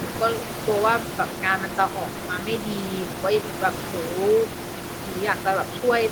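No technical faults can be heard in the recording. Room noise from the microphone's surroundings sits in the background at about 10 dB below the speech, which belongs to the recording itself rather than to the system.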